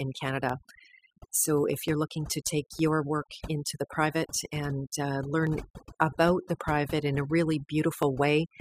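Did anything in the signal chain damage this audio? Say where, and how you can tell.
Yes. Overdone noise removal in processing runs throughout. The background sits near silent with twinkling specks. Bands near the noise estimate are cut hard.

Dropped samples cause sharp single clicks at 0.49, 1.88, 2.79, 5.47 and 8.03 s. Each is likely a sub-millisecond gap at the buffer stage. The waveform jumps.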